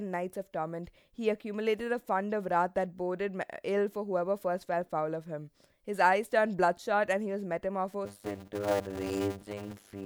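From 8.05 s to the end, the speech takes on a steady 100 Hz buzz and slows to about half speed (0.533×) while keeping its timbre. This is a block size mismatch (padded). Each block written, which fits 256 samples, is shorter than the block read next, and the leftover is zero-filled.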